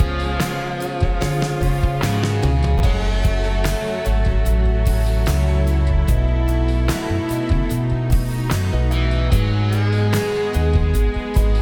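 At 2.78 s the audio briefly scrambles, with chunks out of order until 2.80 s. Two short chunks, each about 10 ms, play in the wrong sequence. The first arrived one chunk late, so it plays after the chunk that should follow it. Nothing is missing. The order is simply swapped. This leaves three hard joins where the waveform jumps. The result is a tiny jumbled blip.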